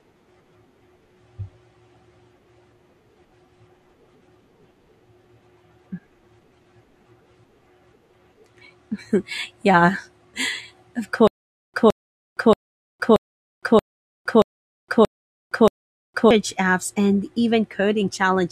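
In this speech recording, from 11.27 s to 16.31 s a 165 ms fragment repeats eight times, each followed by about 464 ms of dead digital silence, a steady 629 ms cycle, before playback resumes at "apps and". This stutter with silent gaps is likely a stalled stream replaying its last buffer, with the intervening audio lost.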